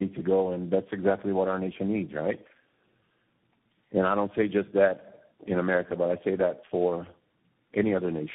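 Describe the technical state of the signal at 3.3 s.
Tandem speech coding at 3.3 s, as throughout: three successive speech coders each recode degraded output, leaving rough, warbly, muffled speech cut off above 3.8 kHz.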